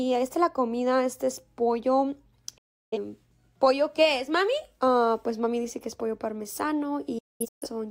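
At 2.57 s the sound fades out within 8 ms and stays silent until 2.98 s. This is a digital broadcast dropout: the receiver muted over failed frames. At 7.18 s it breaks into scattered holes, the longest 213 ms, until 7.67 s. The missing audio is gone.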